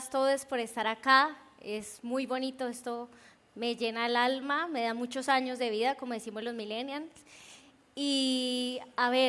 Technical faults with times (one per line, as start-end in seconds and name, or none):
none